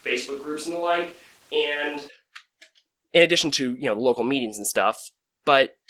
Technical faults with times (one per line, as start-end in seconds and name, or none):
0.00-5.90 Opus voice compression
0.00-2.07 switch to a distant microphone